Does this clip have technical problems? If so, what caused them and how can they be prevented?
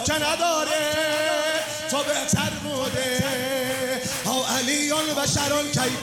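No, nothing stood out as a technical problem on listening, so there is no cause to trace and nothing to prevent.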